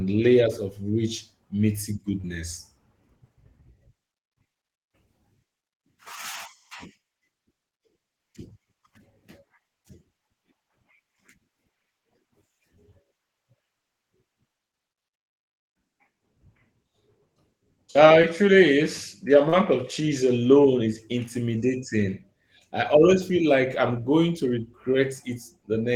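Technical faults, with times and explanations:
2.21–2.26 s (after "layers of rich meaty"), 18.22–18.25 s (before "truly is"), 19.49–19.54 s (before "of cheese alone is"): short concealed packet loss. About 20, 20 and 40 ms of audio never arrived. The decoder extended the preceding sound, causing brief smears, consistent with lost 20 ms packets.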